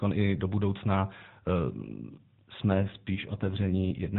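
From 2.69 s to the end, the already narrowband mobile-codec speech turns rougher and buzzier: an AMR rate drop, consistent with the codec falling from 12.2 to 5.9 kbps on a weak link. Unlike a dropout or bandwidth switch, there is no gap and the 4 kHz band stays unchanged.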